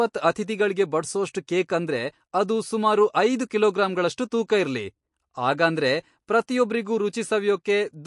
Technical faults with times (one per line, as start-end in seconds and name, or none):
0.00-8.07 MP3 compression
6.47 pre-echo